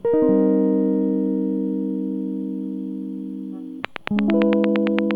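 A train of clicks runs from 3.85 to 5.12 s over this music, about ten evenly spaced ticks at 8.7 per second standing well above the sound, likely interference injecting regular pulses.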